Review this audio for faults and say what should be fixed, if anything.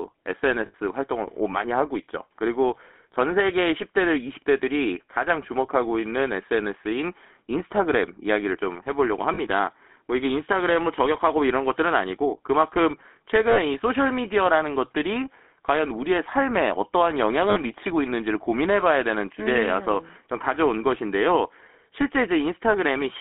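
The speech has a buzzy, gravelly roughness throughout, confined to a narrow band of roughly 250 Hz to 3.6 kHz with nothing above. That is the GSM full-rate codec. It rebuilds the voice from a vocal-tract model driven by a sparse, regularly spaced pulse excitation, which fits 13 kbps coding and leaves the grainy texture plainly audible. To prevent it, carry the call over a wideband codec such as AMR-WB or Opus instead of GSM full rate.

Four short stretches hold the sound on a rough, metallic ring instead of letting it move on: 0.66 to 0.75 s (about 80 ms), 9.34 to 9.39 s (about 40 ms), 13.5 to 13.59 s (about 60 ms) and 17.5 to 17.58 s (about 60 ms). These are lost GSM frames. The decoder reuses the last good frame's settings, so each gap comes out as a frozen, metallic smear. To prevent them, fix packet or radio loss on the link with better coverage, a jitter buffer or forward error correction.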